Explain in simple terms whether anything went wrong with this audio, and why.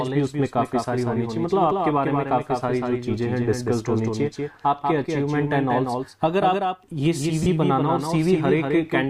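Two things went wrong. First, there's a doubled audio track running through the whole clip: a second copy of the same sound trails about a fifth of a second behind, a bit quieter, with no echo tail. It's likely from the audio being captured twice along a slower path.

Second, there are lost LE Audio frames from 7.43 to 7.46 s, a gap of about 30 ms. The Bluetooth link dropped a few packets, and the decoder patched the hole by reusing the last bit of sound with scrambled detail, so it comes out as a brief noisy smear.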